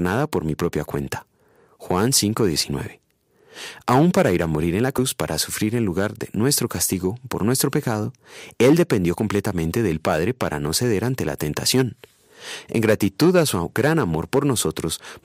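A speech recording in which, at about 4.97 s, compressed frames are skipped. The sound jumps forward by roughly 70 ms, which fits a few whole frames of about 23 ms each being lost from the file or rejected by the decoder as damaged. What separates this from a dropout or a sample-level glitch is that no silent gap opens, and the speech simply resumes slightly further along.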